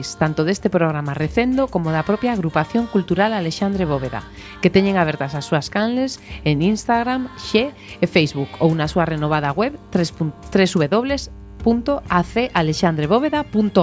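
No technical faults can be heard anywhere in this recording.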